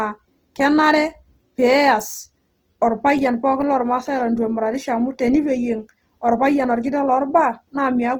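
All the way through this speech clip there's a grainy, rough texture, and it sounds likely to be Opus compression in its music-style CELT mode. The band energies stay in place, but the fine detail inside them has been swapped for folded copies and noise, so voiced sounds come out fizzy rather than hollow or swirly. The bandwidth stays wide, up to about 20.2 kHz, and the damage is plainly audible, which points to a low rate around 16 kbps.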